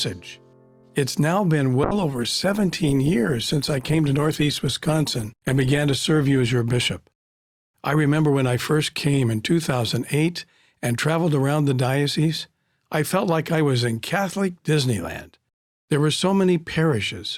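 From 1.84 s to 10.09 s there is a call bitrate drop. The bandwidth estimate fell and the encoder coarsened its coding, trimming high frequencies, so the audio turns rough and muffled, worst for about 3.4 s, consistent with a fall from 128 kbps to around 17 kbps.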